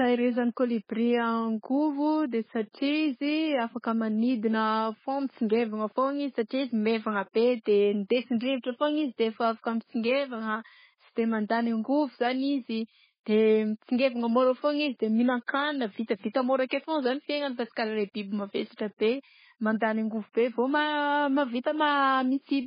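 From start to end the speech carries heavy MP3 compression damage, likely from a very low bitrate around 16 kbps: nothing survives above 5 kHz, and weak detail flickers frame to frame, giving a watery swirl and chirpy s sounds that a plain low-pass filter would not add.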